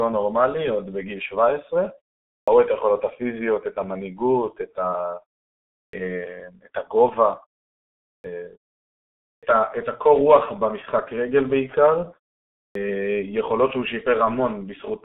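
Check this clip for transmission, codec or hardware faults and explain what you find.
Two faults are present in this speech: heavy low-bitrate codec damage throughout, and word onsets cut off after pauses.

The G.723.1 codec damage runs the whole length. The sound is muffled and hoarse, with nothing above 3.8 kHz and a narrow line band of roughly 200 Hz to 3.6 kHz. Consonants blur because the coder's slow 30 ms frame model smears fast changes, which fits a bitrate near 6 kbit/s. Plain telephone band-limiting would stay clean. This one adds rough buzz.

Clipped starts after a pause occur at 2.4, 5.85, 8.16, 9.34 and 12.67 s, each following a silence of about half a second to 0.85 s. The output device idles during silence and needs time to wake, so the first 75 to 86 ms of sound is lost and it begins abruptly. These clips remove actual speech onsets.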